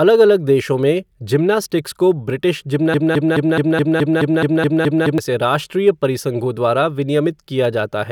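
Speech clip with a broken-record loop from 2.94 to 5.18 s: a 0.21 s fragment plays back to back eleven times, identical each pass. That's most likely the player or stream stalling and resending its last chunk, so whatever should've played there is gone.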